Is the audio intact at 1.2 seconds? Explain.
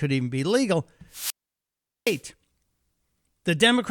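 No, a wireless microphone squelch dropout runs from 1.09 to 2.23 s after "even be legal": the fading radio signal brings rising hiss before the receiver mutes it for 0.77 s, unlike a clean digital cut.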